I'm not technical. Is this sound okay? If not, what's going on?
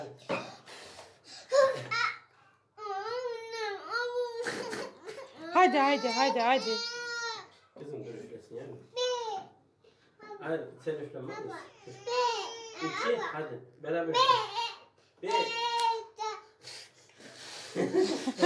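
Yes, nothing in this recording points to a technical problem. There is nothing here that needs fixing or adjusting.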